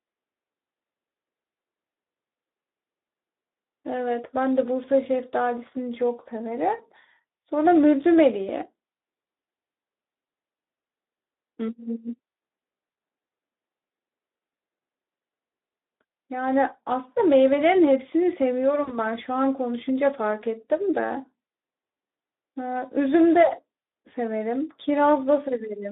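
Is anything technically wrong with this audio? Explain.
Yes, there are two problems: the whole recording has been through a low-rate Speex speech codec, and there are two brief dropouts where lost packets were patched over.

Speex codec damage runs the entire length. The speech sits in a narrow phone-style band of about 250 Hz to 3.7 kHz, and the codec plainly struggles. Its CELP model has too few bits to describe the excitation, so the voice comes out hoarse, grainy and a bit synthetic instead of clean. The degree of damage fits a setting around 11 kbps.

VoIP packet loss concealed by the speech codec happens at 12.91 to 12.95 s and again at 18.83 to 18.93 s. Each time, about 40 ms of audio went missing, which fits two dropped 20 ms frames. The decoder filled each gap by extrapolating from the last pitch and filter it had, with the level sliding down. You hear a short buzzy, smeared stretch. 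At 18.83 s the roughness lingers a little past the gap while the decoder's state recovers.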